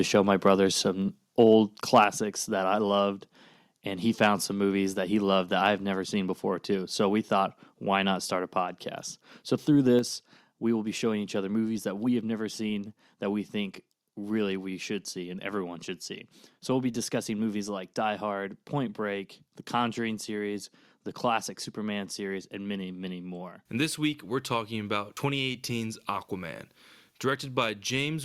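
A harsh, crackling edge hits the loudest syllables from 1.4 to 1.54 s and again from 1.94 to 2.04 s, with the tops of those peaks flattened. This is microphone overload, likely caused by an input level that drove the converter about 1 to 3 dB past its ceiling, though only a small share of samples is clipped. At 2.04 s, speech and background drop together by about 4 dB in one abrupt step. This is the microphone volume stepped down, likely the call software reacting to the clipped peak just before. The same overload crackle returns briefly from 4.23 to 4.27 s, about 3 dB over, and at 10.0 s the level falls in another single step of about 4 dB.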